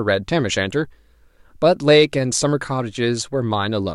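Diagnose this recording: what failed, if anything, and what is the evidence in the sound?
Nothing failed in this speech recording; there's no dropout, glitch or other audible trouble anywhere to point to.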